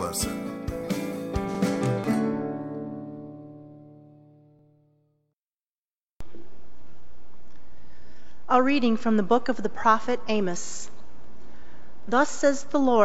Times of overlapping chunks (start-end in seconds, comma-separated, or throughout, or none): 1.55-1.59, 4.59-4.64, 7.64-7.68, 10.68-10.72